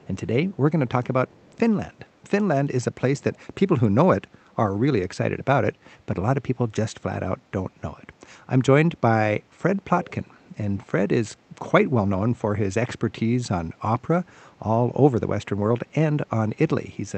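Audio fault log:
0.00–0.07, 1.28–1.59, 3.17–3.22, 4.51–4.56 and 10.04–10.13 s, echo leak: a faint delayed copy of the speech, roughly 25 to 40 dB down, trails by a constant 199 ms, likely residue a loudspeaker-side echo canceller missed. The fixed lag and brief scraps distinguish it from smoothly decaying room reverberation.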